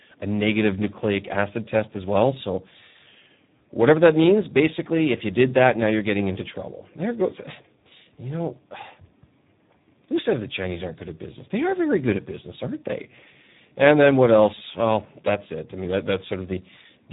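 From start to finish the speech carries heavy Speex codec damage. This CELP coder has too few bits to model the excitation, and the strain fits a setting around 8 kbps. The result is a hoarse, buzzy, semi-robotic voice with noisy grit. Nothing is heard above 3.8 kHz. What sets it apart from a simple band-limit is that the damage is not only lost treble: the voice texture itself is rebuilt crudely, roughened and mechanical.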